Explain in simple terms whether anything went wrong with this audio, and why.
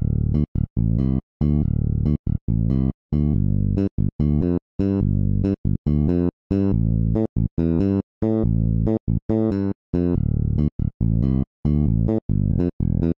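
Two brief glitches stand out, at 4.41 s and again at 12.49 s. Each is a tiny blip, over almost as soon as it starts. Both come from damaged data in a compressed stream. A small piece of the stored file was wrong at those points. The decoder could not read that piece properly. It lost its place for a moment, then found the next good section and carried on. That hiccup is the blip you hear.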